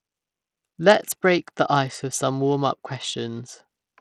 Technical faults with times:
0.00-4.01 Bluetooth SBC compression

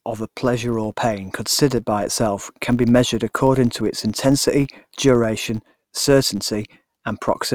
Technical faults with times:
0.00-7.55 filter restarted on every block

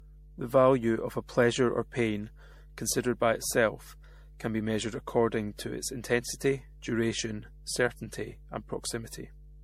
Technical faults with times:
0.00-9.63 mains hum
0.00-9.63 generation loss

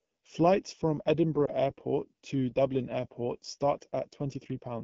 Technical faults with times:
0.00-4.84 channel delay (comb filtering)
0.00-4.84 AMR wideband (HD Voice) codec
1.45-1.52 lost AMR speech frames

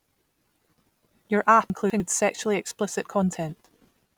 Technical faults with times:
1.70-2.00 chunks out of order

